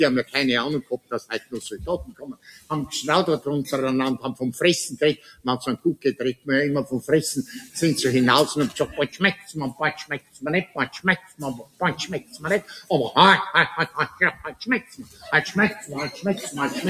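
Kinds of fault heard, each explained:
Noise suppressor applied to music or sounds: A suppressor built for speech stays active through the whole clip. It treats sustained tones, ambience and reverb tails as noise and pulls them down. Sharp onsets pass mostly intact, while held parts sink. The gain keeps moving, with swings of roughly 15 dB, so the sound pumps and thins. Sustained passages lose body, and decays end early instead of fading naturally.
Sound cut by the noise suppressor: In places the suppressor turns this sound down harder than the surrounding material. Five stretches stand out: 0.24 to 2.71 s, 5.16 to 6.48 s, 7.01 to 7.76 s, 9.1 to 12.9 s and 13.88 to 16.24 s. The deepest drops reach about 18 dB, with the 7 s stretch lighter at about 10 dB. Steady and fading parts dip audibly within each span.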